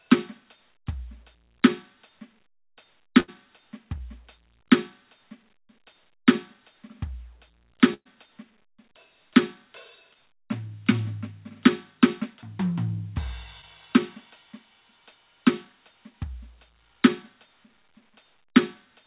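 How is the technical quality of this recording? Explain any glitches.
The recording has two bursts of packet loss and three short concealed packet losses, all in music carried over a call path whose band stops at 4 kHz, as with a narrowband telephone codec such as G.711 A-law.

Burst of packet loss, 3.20–3.30 s and 7.94–8.07 s: about 80 ms and 120 ms of audio never arrived in time. The receiver extended the last sound as a fading buzz or hiss, and in the second burst this decayed into roughly 60 ms of silence. The music then resumes further on. Unlike the short losses, these gaps last long enough to hear as a dropout, not a blur.

Short concealed packet loss, 3.98–4.02 s, 10.13–10.17 s and 13.61–13.64 s: about 20 ms went missing each time. The receiver patched each hole with a brief continuation of the preceding sound and blended back in. What you hear is only a quick smear or wobble.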